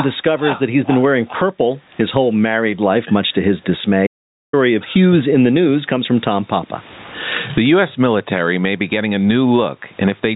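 Gain pumping runs through the whole speech clip. The level swings by roughly 25 dB as the gain is pulled down on each loud syllable. This is likely a fast limiter or compressor acting on a microphone set far too hot. On the waveform, loud and soft stretches sit closer in level than they should.

From 4.07 to 4.53 s, an audio dropout to silence removes about 460 ms. The speech stops abruptly mid-flow and resumes just as suddenly, and the gap carries no room tone at all, only dead digital silence. The likely cause is the input being lost while the recorder kept writing silence. The waveform shows a flat line with hard edges at both ends. The spectrogram shows a clean black vertical band across every frequency, in contrast to the grey noise floor around it.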